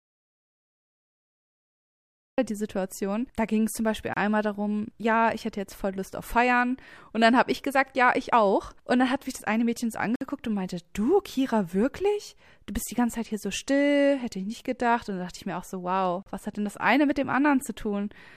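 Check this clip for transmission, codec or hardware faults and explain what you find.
Two kinds of fault are present: a dropout to silence at the start, and three short gaps where stream segments join.

Audio dropout to silence, 0 to 2.38 s: The input was likely cut off upstream, by a lost connection or a mute, while the recorder kept writing silence. The speech clip opens in silence with no room tone, and the sound only arrives abruptly at 2.38 s. Anything spoken during those first seconds is gone.

Gap between stream segments, 4.14 to 4.17 s, 10.16 to 10.21 s and 16.23 to 16.26 s: The timestamps of consecutive segments don't butt together, so the player inserts silence to bridge each join. The gaps last about 30, 57 and 35 ms and recur every 6 s, which fits 6-second segments. Each one is a hard-edged hole that briefly chops the sound, but no audio is missing.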